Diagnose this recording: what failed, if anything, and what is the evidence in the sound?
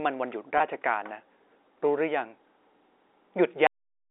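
Packet loss with pitch repetition occurs at the network stage, from 0.58 to 0.60 s. A gap of about 20 ms, which fits a single lost packet, is bridged by the receiver looping the last pitch period, so the speech briefly takes on a held, buzzy quality before normal flow resumes. On a spectrogram the harmonics run flat and unchanging for that span. In the waveform, the same periodic cycle repeats while fading, then blends back into varying speech.

A cut-off end occurs at the storage or playback stage, at 3.67 s. The speech stops mid-sound because the final buffers were never written or played out, leaving about 0.4 s of digital silence with no natural decay. The waveform drops abruptly from ongoing speech to a flat, silent line. The spectrogram shows energy ending in a hard vertical edge across the 300 Hz to 3.7 kHz telephone band that G.711 A-law coding carries.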